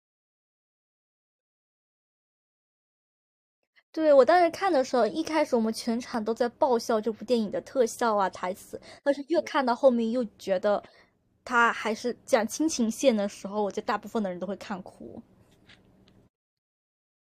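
At 6.14 s an overlap between stream segments cuts 6 ms at a segment join. The waveform jumps, producing a tiny skip rather than a silent dropout.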